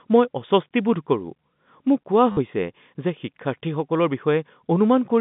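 A brief robotic stutter from 2.32 to 2.37 s is packet loss with the last packet repeated, covering a 50 ms gap, which fits 10 ms packets.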